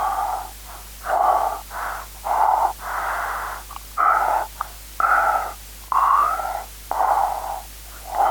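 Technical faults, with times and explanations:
No technical faults are audible, and the signal stays intact and steady for its entire duration.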